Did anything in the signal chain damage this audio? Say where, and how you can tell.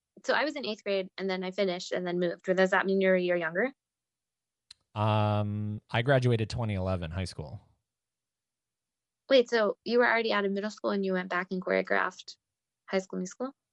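Yes. Bluetooth LC3 compression runs through the whole speech clip, so the damage sits at the codec stage, most likely a Bluetooth LE Audio link. The upper spectrum sounds partly hollowed out and back-filled with noise, giving the speech a breathy, grainy edge that is plainly audible from start to finish. That comes from the transform codec dropping high-band detail and substituting synthetic noise, and the degree of it fits roughly 48 kbps with 10 ms frames.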